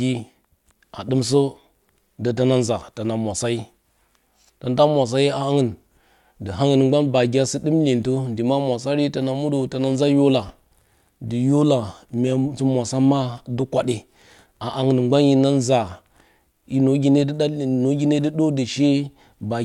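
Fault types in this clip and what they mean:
Nothing here to flag: the speech comes through without any audible glitch or defect worth listing.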